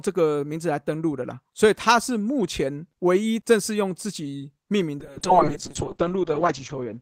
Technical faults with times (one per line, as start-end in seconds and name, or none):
5.03-7.02 call bitrate drop